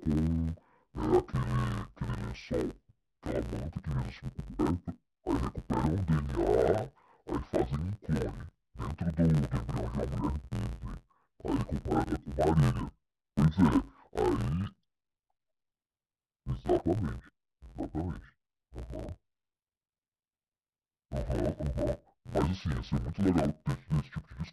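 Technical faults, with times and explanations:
Throughout, interleaved audio read as planar: each 11.61 ms block, which fits a 512-sample buffer, has its alternating left-right samples split into halves. The halves play together at half speed, so the speech sounds dull and robotic, buzzing at 86.1 Hz without an obvious octave drop.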